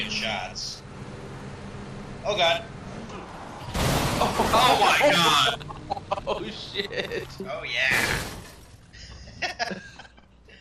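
Throughout the clip, the encoder has likely starved the signal of bits in the way MP2 compression does at a low rate, with the damage sounding consistent with something around 80 kbps. Splitting the audio into 32 sub-bands and rationing bits among them has left the upper bands switched off or flickering in and out. What survives is coarsely quantised, so the sound is plainly dulled and carries a gurgling, granular distortion across its whole length.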